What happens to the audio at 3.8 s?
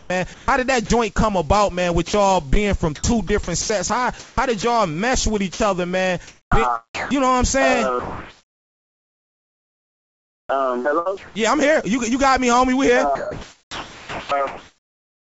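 At 3.8 s the sender's voice detector is likely toggling transmission on and off, between 2.08 and 4.64 s, swapping about 0.52 s of real sound for comfort noise. The result is choppy audio with holes where the real sound was replaced.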